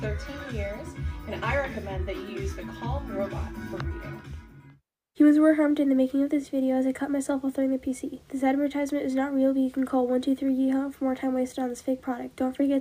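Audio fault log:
No technical faults can be heard anywhere in the signal.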